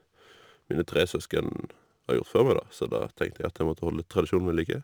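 Sample clock jitter runs through the whole speech clip. The converter's timing wanders by a few microseconds, so each sample lands slightly off its intended moment, and the error grows wherever the waveform changes fastest. The result is a grainy hiss roughly 30 dB below the signal that swells on loud, bright syllables and disappears in pauses. A spectrogram shows a signal-dependent haze filling the upper frequencies during speech and clearing in gaps. The waveform looks nearly clean, with faint fuzz on steep slopes.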